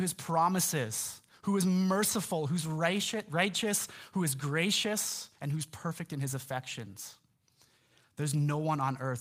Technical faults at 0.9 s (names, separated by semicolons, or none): none